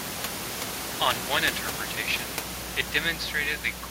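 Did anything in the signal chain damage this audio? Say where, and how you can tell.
No, nothing in the signal chain damaged this audio.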